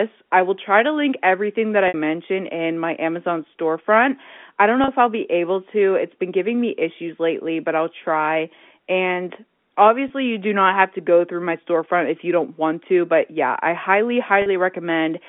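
Speech over a telephone-band line shows four brief packet-loss dropouts: at 1.88 s for 60 ms after "to link everything that", at 4.84 s for 40 ms, at 10.08 s for 20 ms before "you do not have", and at 14.42 s for 40 ms after "yeah I highly". This is packet loss with pitch repetition, where the receiver bridges each lost stretch by repeating the last pitch period.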